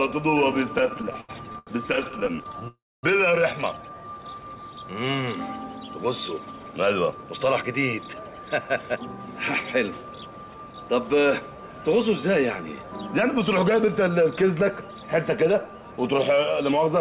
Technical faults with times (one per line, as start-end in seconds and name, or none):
0.78-2.68 repeated stalls (stutter)
2.68-3.05 call audio freeze
3.77-3.96 jitter buffer slow-down
6.39-8.79 jitter buffer speed-up
13.73-15.04 jitter buffer speed-up